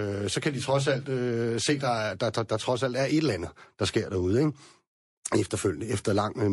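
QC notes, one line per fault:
Throughout, MP3 compression: watery, swirly speech with chirpy s sounds, likely from a low-bitrate MP3 encode, around 48 kbps, starving quiet frequency lines.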